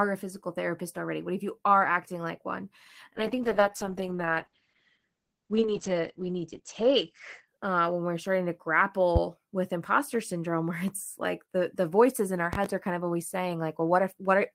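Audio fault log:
3.16–8.53 s, call bitrate drop: Right after "are acting like one" the speech turns rough and watery and loses its brightness, with sibilants dulled. The bandwidth estimate fell and the encoder was cut from 32 kbps to 9 kbps, holding the lowest rate for 3.56 s. At that rate Opus codes the spectrum coarsely and narrows the audio band from 20 kHz to 8 kHz, so the crisp top end disappears until the bitrate recovers.
9.16–9.19 s and 12.53–12.68 s, loud pop: A sharp, loud pop, about 15 dB above the speech, lands just before "with imposter syndrome". A second event, a quick double pop, comes after "the voices in our" and before "are kind of always". The speech carries on underneath each pop. The likely cause is a sudden voltage step or pulse, from a plug, a switch, static or a driver glitch, added to the signal and shaped by the circuits after it.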